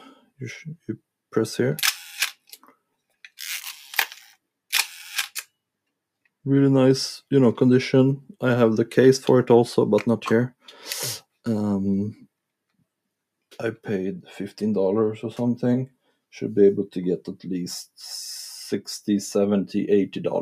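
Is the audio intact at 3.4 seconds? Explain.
Yes, the audio at 3.4 seconds is intact, with no dropout, click, distortion or other fault at that point.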